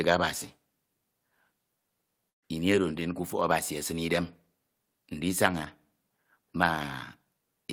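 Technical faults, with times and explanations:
2.29 to 2.44 s, burst of packet loss: just before "ini oro", about 140 ms of speech is lost in a row. The receiver covers the hole for about 130 ms by repeating the last sound and fading it, giving a brief held sound that sinks into near silence. On a spectrogram, steady smeared energy thins out to a blank patch. On the waveform, a repetitive, shrinking envelope drops to almost flat before speech resumes abruptly, with nothing joining the two sides.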